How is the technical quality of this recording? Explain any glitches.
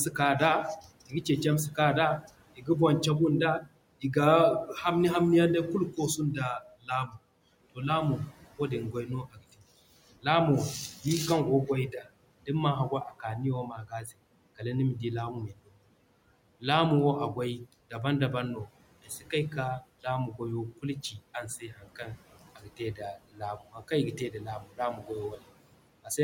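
The recording is clearly processed by a noise suppressor that works throughout and repeatedly bites into the speech itself. The room noise, sitting about 20 dB below the voice, is heard only as the remnant the suppressor leaves behind.

Noise suppressor artifacts run through the whole clip. The suppressor pulls down the bands it judges to be steady noise by about 18 dB, frame by frame, so the background dips between phrases and swells back under speech. This band-by-band action sets it apart from a plain noise gate's abrupt on-off switching.

Speech cut by the noise suppressor happens from 0.11 to 2.69 s, 3.6 to 4.68 s, 5.91 to 7.78 s and 8.93 to 26.18 s. Quiet speech was mistaken for noise and lowered with it, by about 14, 13, 16 and 18 dB at worst. The affected portions add up to roughly half a second, a tenth, three tenths, and two seconds. Endings and soft consonants sound swallowed, unlike dropouts, which leave true silence rather than faint speech.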